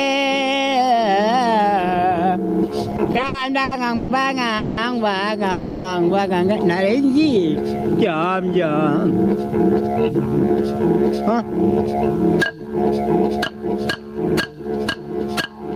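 The whole clip has gain pumping: the level is pulled down on every loud sound, with a swing of roughly 20 dB. That's most likely gain set far too high into a fast limiter, which squashes everything flat.

From 2.91 s to 4.10 s there are repeated stalls, a stutter of about ten short hitches. The receiver keeps stretching the last bit of sound while late packets catch up, about 350 ms in all, the longest around 130 ms, so it drags without losing anything.

Two call audio freezes follow, at 4.58 to 4.79 s (about 190 ms) and 5.51 to 5.86 s (about 330 ms). Each time the last sound hangs as a fading buzz or hiss, likely packets held up in transit draining the jitter buffer, and then picks up exactly where it stopped.

From 8.97 s to 13.66 s there's a jitter buffer speed-up. The receiver had built up too much delay and trimmed tiny pitch-period slices, about 0.4 s in total, so the sound runs around 8% fast at the same pitch and feels rushed.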